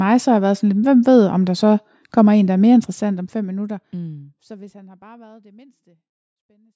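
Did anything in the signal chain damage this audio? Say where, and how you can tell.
No, nothing in the chain damaged this speech: the smooth fade-out from around 2.5 s to the end is an ordinary edit with no click or hard edge, and the call microphone processing, with nothing above 8 kHz and the lowest bass high-passed away, is normal band-limiting rather than damage.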